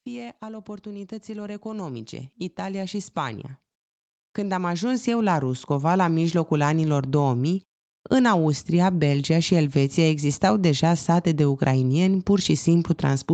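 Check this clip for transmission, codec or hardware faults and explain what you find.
There are two automatic gain control faults in this speech clip, both gain rising. The first runs from 0.39 to 3.5 s and the second from 4.36 to 7.2 s. In each case the gain control judged the input too quiet and raised its gain gradually, by about 10 dB the first time and about 6 dB the second. As a result, the voice and the background noise swell together over a couple of seconds instead of holding a steady level. Throughout the clip, the sound is limited to 8 kHz and carries the usual coding noise, which fits a wideband Opus call path.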